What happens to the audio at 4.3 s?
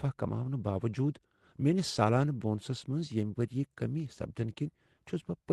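Nothing goes wrong at 4.3 s: the speech passes through intact, with no dropout, glitch or distortion at that moment.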